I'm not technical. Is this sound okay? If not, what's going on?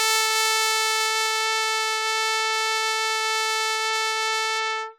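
Yes, no faults here.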